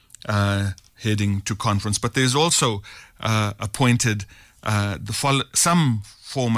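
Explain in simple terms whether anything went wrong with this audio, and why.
Nothing went wrong with this speech recording: no dropouts, glitches, distortion or timing problems can be heard anywhere in it.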